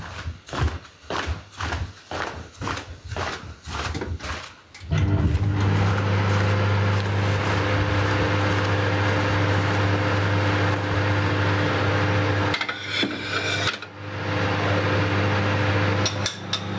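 Right from the start and all the way through, there's gain pumping: the gain is pulled down, roughly 20 dB, on each loud sound, so everything sits squashed together. The likely cause is input gain set far too high, with a fast limiter clamping down, heard through call-style processing that tops out around 8 kHz.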